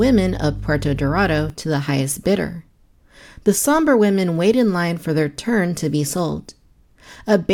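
From the start to 1.5 s, just before "to the highest bidder", mains hum sits under the speech: a steady 50 Hz tone roughly 10 dB down, leaked in from the power line. A spectrogram shows a flat 50 Hz line; the waveform rides a regular wobble.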